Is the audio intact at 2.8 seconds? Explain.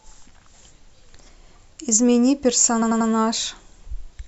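No. Repeated frames run from 2.81 to 3.09 s. A 92.9 ms block of compressed audio plays three extra times, which fits a run of a few frames sent more than once. It sounds like a stutter, and adds about 279 ms.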